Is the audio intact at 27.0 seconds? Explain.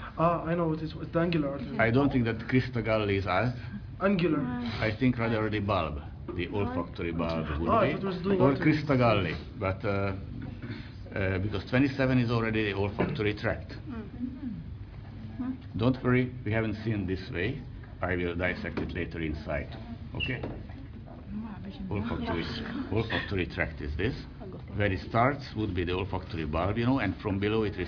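Yes, the audio is intact at 27.0 seconds, with no fault audible at that moment.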